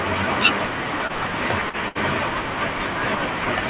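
Short concealed packet loss at 1.07 to 1.12 s and again at 1.69 to 1.76 s: audio arrived too late, so the receiver extended the preceding sound for about 21 ms and then 41 ms before blending back. Each is heard as a brief smear, with roughly 30 ms of the original skipped.

A burst of packet loss follows at 1.88 to 1.98 s. A longer run of audio was lost, and the receiver stretched the last sound for about 67 ms while fading it, giving a short held, dwindling sound. It then resumes with about 60 ms missing, all within a narrowband call path that stops at 4 kHz.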